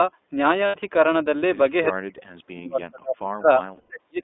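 The iLBC codec colours the whole clip. The sound sits in a narrow line band of about 250 Hz to 3.6 kHz, and each 20 ms frame's excitation is coded on its own, which fits a 15.2 kbps stream. The result is plainly audible roughness and a synthetic edge on the speech.

Lost iLBC frames first appear from 0.66 to 0.76 s. About 80 ms goes missing, which fits four 20 ms frames. The decoder fills the hole by repeating the last pitch cycle blended with noise, so it sounds like a brief held, breathy vowel before the speech snaps back cleanly.

Speech suppressed in double talk starts at 1.92 s and runs to the end of the clip, affecting roughly two seconds in total. The talker's level dips, at worst falling by around 40 dB. The likely cause is an echo canceller that cannot tell the near talker from loudspeaker echo while both sides speak, so it turns both down.

Lost iLBC frames return from 3.76 to 3.92 s, a longer 140 ms gap that fits seven frames. 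The concealed pitch cycle is held longer and fades as the loss continues, and then speech resumes almost immediately.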